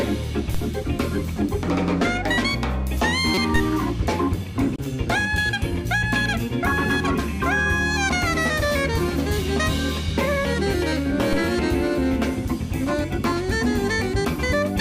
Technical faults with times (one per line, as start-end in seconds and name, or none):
0.54 DC step
3.34-3.38 corrupt frame decoded
3.56 DC step
4.76-4.79 corrupt frame decoded
11.33 DC step